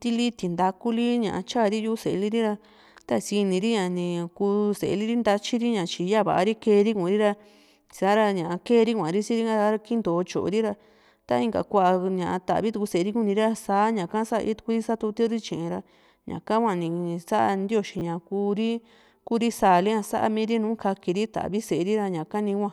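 Speech, with one instance of chunks out of order between 17.99 and 18.01 s. A 10 ms chunk of audio arrived late and plays one chunk after the point where it belongs, so two neighbouring slices are swapped. Nothing is missing, but the swap creates three hard joins, heard as a brief jumbled flicker. On a waveform, the joins show as abrupt discontinuities about 10 ms apart. On a spectrogram, they appear as thin vertical broadband lines where the harmonic traces jump and then resume.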